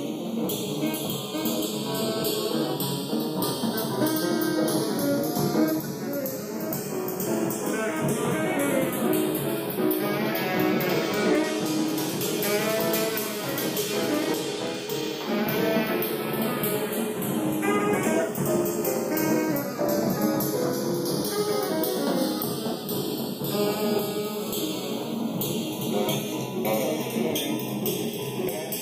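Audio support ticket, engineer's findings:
Channels drifting apart, throughout. Left and right likely captured on separately clocked devices, error around 20 ppm; inter-channel delay slides to under half a millisecond by the end. Mono sum shows comb notches sweeping slowly, heard as gradual flanging across the audio.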